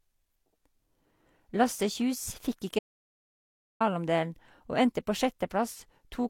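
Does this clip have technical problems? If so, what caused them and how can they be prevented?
Yes. Throughout the speech, two sets of compression artefacts smear together and nothing is present above 18.4 kHz. This is likely transcoding between lossy codecs, consistent with Vorbis re-encoded as HE-AAC. To prevent it, encode once from the original source and keep intermediate copies lossless.

From 2.79 to 3.80 s, the speech cuts to silence with no room tone for about 1.01 s. This is an audio dropout to silence, likely from input lost while recording continued. To prevent it, secure cables and links, and monitor input levels during capture.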